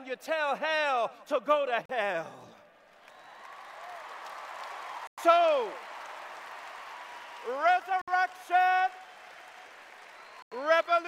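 Brief silent gaps at 1.86 s (40 ms), 5.07 s (104 ms), 8.02 s (62 ms) and 10.42 s (93 ms), each resuming cleanly rather than glitching, point to a likely Bluetooth stall with the headphone buffer running dry.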